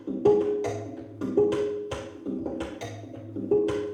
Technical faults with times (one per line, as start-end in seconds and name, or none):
none